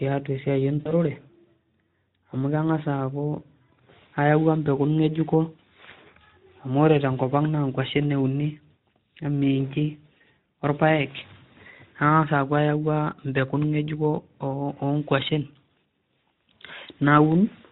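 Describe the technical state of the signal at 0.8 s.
At 0.8 s you're in a stretch of VoIP packet loss concealed by the speech codec, running from about 0.80 to 0.93 s. Roughly 60 ms of audio went missing, which fits three 20 ms frames. The decoder filled the gap by extending its last pitch and filter with a falling gain, so the speech smears into a buzzy tone or coloured noise that fades, and stays weak or distorted for tens of milliseconds after, on top of the light Speex coloring.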